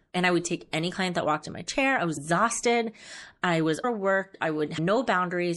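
Likely MP3 compression at a low bitrate, around 64 kbps, strips the treble and toggles weak detail throughout the speech, leaving it plainly watery, swirly and dull. Compressed frames skipped at 2.16, 3.83 and 4.77 s drop several 26 ms frames each, so the speech jumps ahead by roughly 0.2, 0.3 and 0.2 s, each join a brief smeared blip.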